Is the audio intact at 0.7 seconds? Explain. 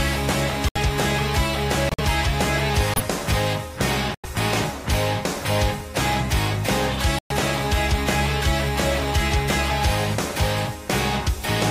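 No. From 0.685 to 0.773 s the sound drops into abrupt silence for about 88 ms, then resumes on time. This is a corrupt frame muted fault: damaged compressed frames, consistent with roughly five frames' worth, were rejected by the decoder and replaced with silence.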